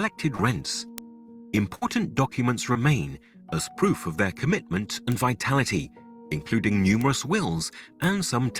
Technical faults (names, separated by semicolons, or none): short concealed packet loss; bit error spike; burst of packet loss